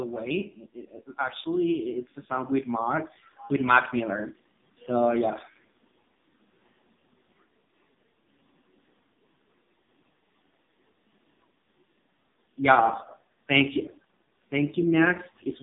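From start to finish the speech carries AMR narrowband mobile codec damage, and it is heavy. Nothing passes above 3.7 kHz, and the low end stops near 150 Hz. The voice sounds buzzy and synthetic. That fits one of AMR-NB's lowest modes, around 5 kbps.

From 1.15 to 4.24 s, automatic gain rising sets in. The gain control judged the input too quiet and turned it up gradually, by about 10 dB. Voice and background swell together across those three seconds rather than jumping.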